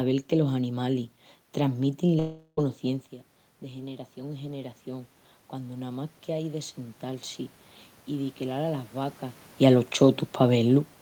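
Speech with two faults. From 2.19 to 2.59 s there is a long network dropout, likely from lost packets: about 0.38 s of audio is missing. The gap never falls to true silence. The last sound is stretched into a fading buzz or hiss, which separates it from a plain edit or mute. From 3.61 to 7.34 s, automatic gain rising can be heard. The talker moves away around 3 s, the input drops by about 13 dB, and the gain then climbs by about 7 dB over several seconds. The room noise swells along with the voice, which tells it apart from the talker simply coming closer.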